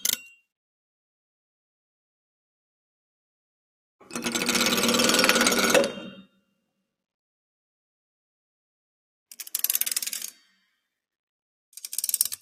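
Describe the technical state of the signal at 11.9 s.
At 11.9 s the signal is intact, with no audible technical fault at that moment.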